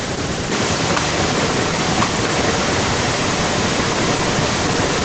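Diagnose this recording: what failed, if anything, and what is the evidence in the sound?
Echo leak from 0.51 s to the end: a second copy of the speech trails it by 1.05 s at roughly equal loudness. The stage is call processing, likely a far-end echo canceller that failed to remove loudspeaker sound its microphone picked up.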